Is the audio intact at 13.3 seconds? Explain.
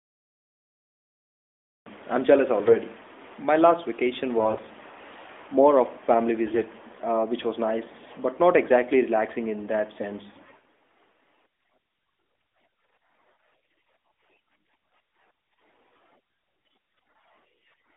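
Yes, the speech at 13.3 seconds is intact, with nothing at that moment beyond the narrowband band-limited sound of the AMR-NB mobile codec path, which is working as it should.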